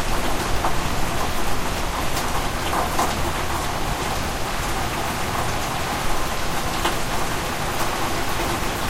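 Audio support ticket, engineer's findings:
No faults found on review; nothing in the audio path to act on.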